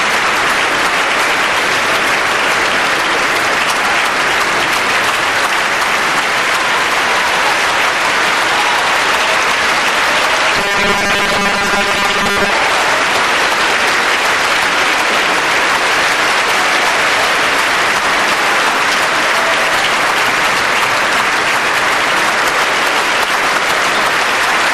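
From 10.56 to 12.53 s the sound turns into a rigid, metallic 200 Hz buzz that only loosely follows the original. This is robotic sound from repeated short buffers, likely from late audio being covered by replaying 5 ms slices, with about half the material repeated.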